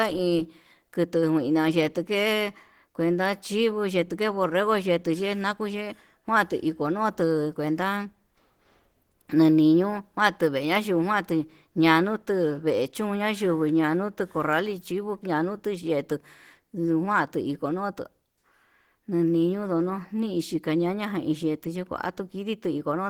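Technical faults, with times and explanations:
Throughout, Opus compression: the speech has a plainly audible hoarse, muffled and grainy quality, with a rough, noisy texture in place of clean detail. That points to likely Opus encoding in its hybrid speech mode at a low rate, something like 16 kbps. The encoder keeps each band's energy but fills what it can't afford with noise, which adds the grit. Bandwidth stays wide, with content reaching up to about 20.4 kHz.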